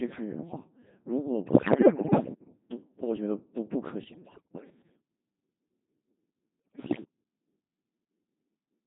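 The whole recording passes through a Codec 2 vocoder, and the heavy damage and buzzy, robotic tone fit its 2.4 kbit/s mode. Only pitch, voicing, energy and a coarse spectral envelope survive, so the decoder rebuilds speech from sine waves. A spectrogram shows smeared harmonic stacks and blurred formants, and the waveform no longer follows the original.

Bit errors on digital voice radio hit three bursts, at 1.47 to 2.34 s, 4.04 to 4.70 s and 6.74 to 7.04 s. Roughly a tenth, then a fifteenth, then a seventh of the bits are flipped. The corrupted frame parameters produce pitch leaps, level jumps, bleeps and warbles. These appear as abrupt harmonic jumps and blocky energy steps.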